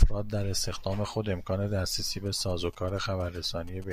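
Speech here, and from about 2.26 s right through to the end you get GSM signalling bursts: a galloping dit-dit-dit of short buzzes at 217 Hz, sitting roughly 25 dB under the speech. That's a 2G phone nearby doing its signalling chatter, sending short groups of radio bursts, and something in the audio circuit rectifying that RF into the pulsed buzz you hear.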